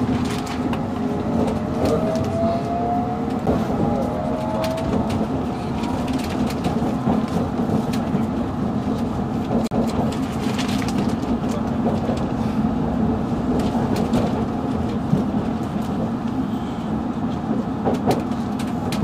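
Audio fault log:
3.46 s and 9.67 to 9.71 s, CD skip: each time the laser lost its track and landed on a different turn of the disc's spiral, so the player muted briefly before resuming from the new position. The result is a short gap, roughly 10 ms at the first and roughly 40 ms at the second, followed by a sudden jump in the audio, because playback resumes from a different place on the disc instead of carrying on where it stopped.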